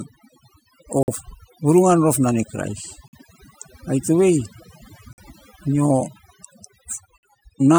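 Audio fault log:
Throughout: overdone noise removal. Bands near the noise estimate are driven to nothing, leaving the voice over near-silence; the spectrogram shows scattered isolated specks and eroded quiet harmonics.
1.03, 3.08, 5.13 and 7.18 s: gap between chunks. Silence of 50 ms separates 2-second chunks at each join, heard as sharp-edged holes; the waveform shows flat blank strips with abrupt edges.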